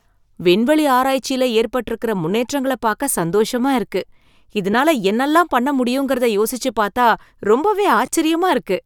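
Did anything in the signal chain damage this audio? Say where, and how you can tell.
Yes: lost LE Audio frames on the Bluetooth link at 4.73 s (before "என்னால்லாம் பண்ண முடியுங்கறத யோசிச்சு") and 8.06 s. The speech briefly turns to noisy smears, about 7.5 ms and 15 ms long, where the LC3 decoder refilled the gaps with the previous spectrum under random signs.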